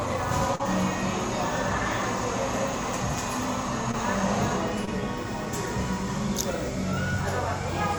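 An everyday-sound recording with short concealed packet loss: brief gaps of about 40 ms at 0.55 s and 20 ms at 3.91 s and 4.85 s were filled by extending the preceding sound, leaving short smears or wobbles.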